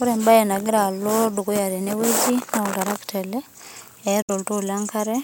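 Audio packets likely failed to reach the headphones in time at 4.22 s and were discarded, a Bluetooth dropout. The speech cuts to silence until 4.30 s, with about 64 ms of audio missing, which fits three lost frames. It then resumes further along, as though it had kept playing.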